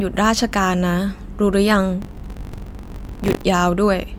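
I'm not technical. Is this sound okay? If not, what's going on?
No. Buffer tearing runs from 2.01 to 3.45 s as a steady robotic buzz about 47 times a second. The program and the sound hardware have slipped out of step, so roughly a fifth of each chunk replays audio from about 40 ms earlier, which fits a 1024-sample buffer.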